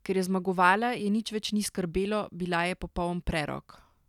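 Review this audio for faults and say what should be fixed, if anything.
No faults were found, so nothing needs fixing.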